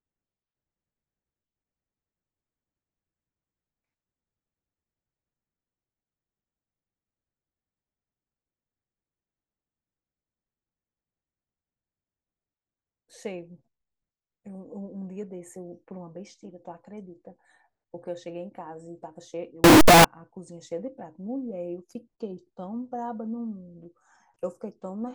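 A speech recording with a short burst of loud, harsh distortion from 19.64 to 20.04 s, lasting about 0.4 s. During that stretch the low-level parts of the waveform come out as loud as the peaks. The likely cause is signed and unsigned mixed up: 16-bit samples read with the wrong sign convention, so the top bit flips and every zero crossing becomes a swing across the whole range.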